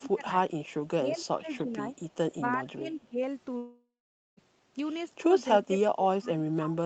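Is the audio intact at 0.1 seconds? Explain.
No. Speech suppressed in double talk covers 0.0 to 0.3 s: the speech dips sharply, by around 20 dB at its deepest. The likely cause is an echo canceller that, with both sides talking, mistook this talker for loudspeaker echo and turned it down.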